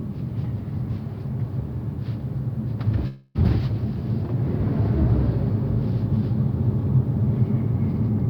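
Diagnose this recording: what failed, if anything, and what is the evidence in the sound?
A long network dropout, likely at the network stage, runs from 3.07 to 3.37 s. The receiver extended the last sound as a fading buzzy fill for about 273 ms rather than going silent, then resumed with roughly 280 ms missing. A spectrogram shows smeared, repetitive bands decaying across that gap.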